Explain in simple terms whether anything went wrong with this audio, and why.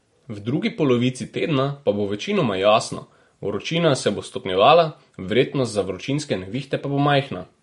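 Yes, something went wrong. The whole speech clip sounds watery and swirly, and nothing is heard above about 11.2 kHz. The likely cause is heavy MP3 compression. The encoder ran short of data, so it cut the treble and dropped quiet detail.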